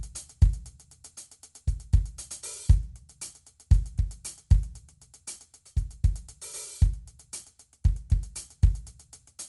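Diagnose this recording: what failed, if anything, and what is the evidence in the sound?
The codec stage failed. Throughout the music, plainly audible coding damage leaves it dull, with rough, fluttering noise around tones, likely from Dolby Digital compression at a bitrate near 64 kbps. A spectrogram shows a hard ceiling at 11.4 kHz and grainy, dither-filled patches where starved frequency lines were refilled.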